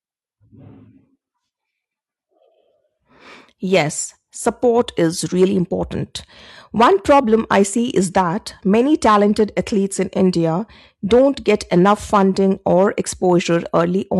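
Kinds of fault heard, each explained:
No technical faults can be heard in this speech recording.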